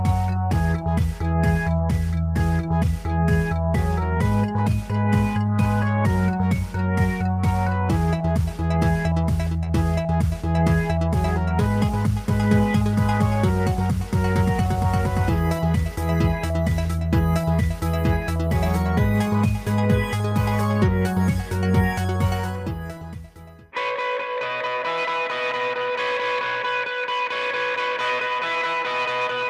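No technical faults can be heard anywhere in the recording. Nothing breaks into the sound at any point.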